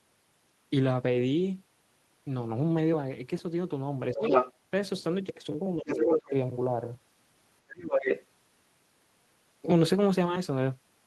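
At 4.13 to 4.23 s the speech is suppressed in double talk, dropping by about 15 dB while a second voice starts leaking through from 4.16 to 4.53 s, roughly 5 dB louder than the speech. The echo canceller likely could not separate the local talker from loudspeaker echo while both sides spoke, so it attenuated both. The same happens from 5.77 to 6.1 s, again about 15 dB down, with a shallower dip of about 5 dB at 6.29 to 6.33 s. The other side's voice, leaking through at 5.87 to 6.3 s and 7.68 to 8.26 s, sits at about the same level as the speech. It is likely residual far-end audio that the canceller failed to remove from the microphone signal.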